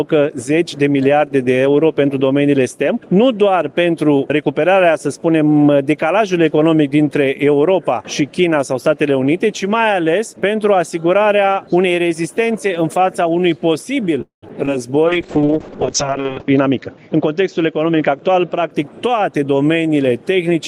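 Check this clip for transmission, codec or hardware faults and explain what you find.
Four kinds of transmission fault turn up, all clustered between 14 and 19 seconds.

Call audio freeze, 14.21 to 14.44 s: the audio likely stalls because late packets let the jitter buffer run dry. The receiver stretches the last sound into a fading buzz or hiss, silent for about 130 ms, then resumes where it stopped, inserting a 211 ms gap. The waveform shows a decaying tail, then flat line.

Short concealed packet loss, 14.48 to 14.51 s and 14.65 to 14.79 s: each time 20 ms failed to reach the decoder, and the receiver patched it by extending the preceding sound before crossfading back. Each sounds like a quick smear or wobble. The spectrogram shows a brief smoothed, repeated-looking patch.

Call bitrate drop, 15.07 to 18.76 s: the bandwidth estimate fell and the encoder went from 32 to 6 kbps, staying at the bottom for 1.38 s. 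The audio turns rough and muffled, and the spectrogram's top edge drops from 20 kHz to 8 kHz.

Jitter buffer speed-up, 16.28 to 19.09 s: with too much audio queued, the receiver trimmed pitch-period slices repeatedly, removing roughly a fifth of a second. Playback runs at 107% with unchanged pitch, sounding hurried. On the spectrogram, events sit slightly compressed in time.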